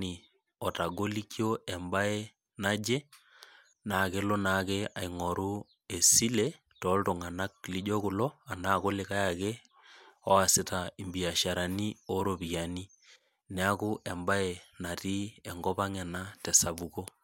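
Nothing goes wrong anywhere along the way here, so there's no fault to point to at any moment in this speech recording.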